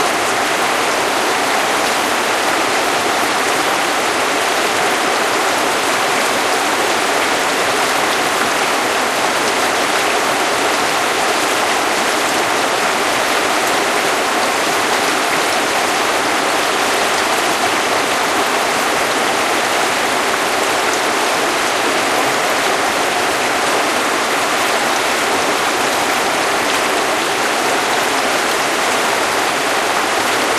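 No technical faults can be heard anywhere in this recording of sounds; the signal stays continuous and intact throughout.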